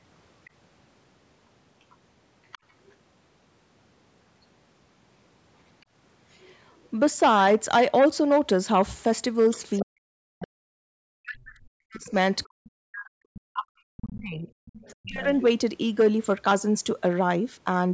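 Other side's voice leaking through appears in this speech recording at 0.45–0.5, 2.52–2.93, 6.41–6.89, 9.51–9.83, 12.38–12.44 and 14.66–15.42 s as faint scraps of a second talker, roughly 20 to 35 dB under the main voice. The likely cause is loudspeaker playback reaching the microphone that the echo canceller failed to fully remove. Speech suppressed in double talk follows at 9.81–14.48 s and again at 15.03–15.25 s. The talker's voice sinks, at worst by around 40 dB, while the far side plays on the loudspeaker, likely because the canceller could not distinguish its own talker from the echo and attenuated both. The call path's band limit, with nothing above 8 kHz, is also present and working normally.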